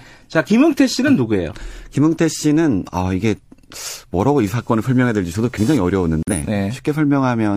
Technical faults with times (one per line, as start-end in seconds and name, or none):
4.47-6.72 computer activity noise
6.23-6.33 corrupt frame muted